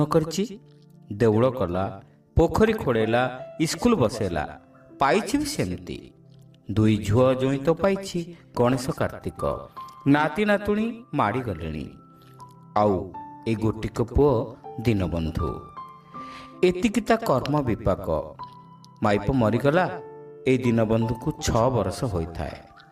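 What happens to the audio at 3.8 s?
At 3.8 s the audio runs on intact, with no dropout, click, distortion or other fault at that moment.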